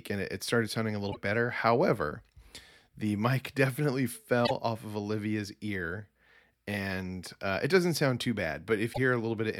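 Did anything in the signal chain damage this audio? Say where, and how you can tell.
Yes: damaged data in a compressed stream at the codec stage, at 1.09–1.17, 4.43–4.51 and 8.90–8.98 s. Corrupt frames break decoder sync, giving brief chirps, squawks, clicks or short holes while it seeks the next header.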